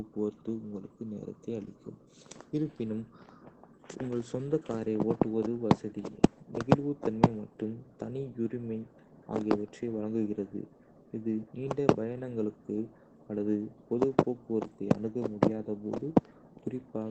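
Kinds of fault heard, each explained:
Opus voice compression: low-rate linear-prediction coding throughout; the speech is cut off near 8 kHz and sounds muffled, hoarse and slightly robotic, consistent with roughly 12 kbps.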